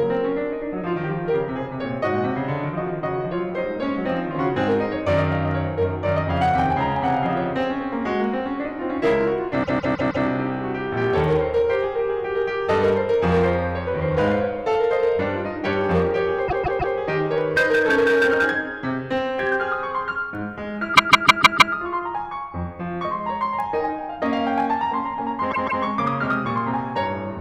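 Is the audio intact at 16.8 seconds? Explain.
No. From 16.47 to 16.94 s the music hits repeated frames: a block of about 157 ms, which fits a run of roughly six compressed frames, plays three extra times. You hear a stutter, and the track runs about 0.47 s longer. Hard clipping is also present at 16.8 s, as it is through the whole clip. The signal is driven about 8 dB past what the chain can pass, so a small share of the peaks get flattened. That adds a gritty crackle on the loud hits.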